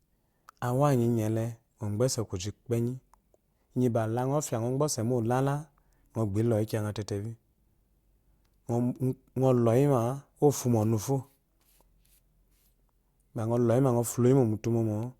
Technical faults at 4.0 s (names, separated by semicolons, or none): none